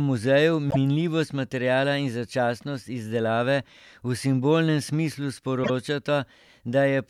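Repeated frames occur at 0.69–0.76 s, just before "minljivost materiala in začasnost", and at 5.63–5.70 s, right after "simbolnem smislu". Each time a 52.2 ms block (about two compressed frames) plays twice, causing a brief stutter. A spectrogram shows an identical slice repeated.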